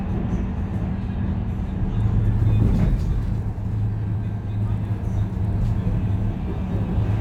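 From 2.33 s to the end, crude rate conversion sets in: the audio was resampled from 44.1 kHz to 48 kHz by nearest-sample repetition, without filtering. The resulting periodic error sits roughly 45 dB below the sound, adding a faint inharmonic fizz that tracks loud and bright passages.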